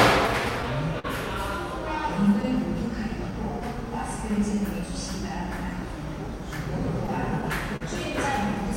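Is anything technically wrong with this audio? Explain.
Yes. The audio shows clock drift between sender and receiver, two short stalls from late packets, and a run of repeated timing corrections.

Clock drift between sender and receiver runs through the whole clip. The sender's clock runs about 3 percent slow relative to the receiver, so the receiver's jitter buffer keeps draining and must be topped up. This causes small, unevenly spaced timing hiccups from start to finish. Random network jitter would push the buffer both ways. Here the errors always lean in the same direction, which points to two clocks running at different rates rather than a bad network.

A short stall from a late packet occurs at 0.99 to 1.06 s and again at 7.76 to 7.83 s. Each time, a packet missed its slot and the buffer ran empty, so the receiver held the last sound for about 45 ms and then about 43 ms. It then resumed exactly where it left off. 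Each stall is heard as a brief held sustain with a slight buzz or dip. Unlike a dropout or concealed packet loss, nothing is skipped, and the timeline is only delayed.

Repeated timing corrections run from 2.06 to 6.41 s. Here the receiver repeatedly inserts tiny repeated pieces to keep pace with the slower sender, an effective speed of 97 percent. Together these add roughly a tenth of a second. The result is a faintly unsteady tempo with occasional small hiccups. Wow or flutter would bend pitch smoothly. These are discrete edits that leave pitch untouched.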